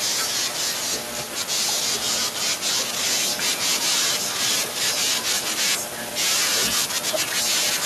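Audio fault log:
0.49–1.64 s, 1.97–2.61 s, 3.30–5.57 s: echo leak. A delayed copy of the speech trails the direct signal by about 0.29 s, roughly 15 dB down in the first stretch and about 10 dB down in the later two. Likely cause: a loudspeaker on one side whose echo canceller let residual pickup through and sent it back. On a spectrogram, a weaker duplicate of the harmonic pattern appears shifted about 0.29 s right. The waveform shows low-level smearing into the gaps between speech bursts.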